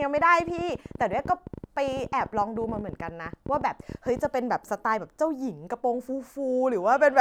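A speech recording carries a train of clicks from 0.02 s to 4.26 s: some 70 sharp ticks at about 14.7 per second, unevenly spaced and standing a few decibels above the speech, audible through the pauses too. On a spectrogram they appear as thin vertical broadband lines scattered across that span; the waveform shows narrow spikes poking above the speech envelope. The cause is likely electrical interference or a faulty connection or power supply injecting repeated pulses.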